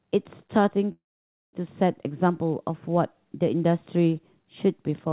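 At 0.92 s the speech, carried over a narrowband call path with nothing above 4 kHz, hits a call audio freeze that lasts until 1.55 s. The last sound stretches into a short fading buzz, then about 0.54 s of silence, likely because packets stalled and the jitter buffer ran dry. Unlike a loss dropout, no speech is cut out. It resumes exactly where it stopped, and everything after arrives about 0.61 s later.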